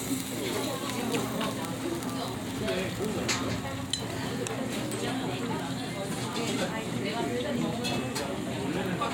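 Nothing is technically wrong with this recording of sounds.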